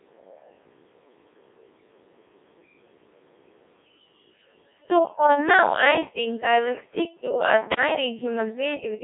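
From start to end, the speech passes through a Codec 2 vocoder. Only pitch, voicing, energy and a spectral envelope survive. Sine waves rebuild the voice, so it sounds heavily robotic and buzzy. The band runs 300 Hz to 3.6 kHz, empty above 3.7 kHz, fitting roughly 1.6 kbit/s.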